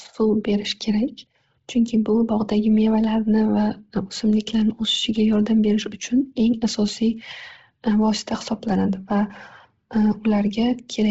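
From start to finish the speech has a breathy, grainy edge, with nothing above 7.7 kHz. That's likely Bluetooth LC3 compression run hard, the kind of heavy damage that fits a bitrate around 16 kbps, where the upper spectrum gets zeroed and refilled with noise.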